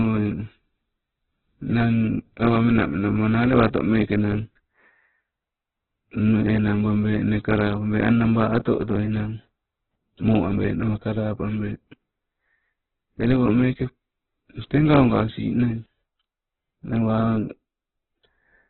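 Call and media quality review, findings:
Opus compression, throughout. Speech band-limited, nothing above 4.1 kHz; tone grainy, rough, noise-filled. Likely Opus CELT mode starved of bits, pointing to about 8 kbps: band energies kept, content refilled by folding and noise, bandwidth cut to narrowband.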